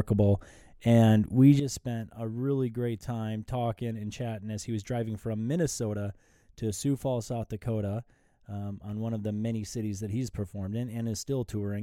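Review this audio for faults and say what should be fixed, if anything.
At 1.60 s the speech and its background noise drop together by about 11 dB in one step and stay down to the end: a sudden gain jump. The likely cause is a gain change applied instantly between adjacent samples, with no ramp. Apply any gain change as a short fade of a few tens of milliseconds, not as a step.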